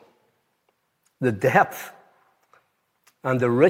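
Nothing stood out on listening to this clip.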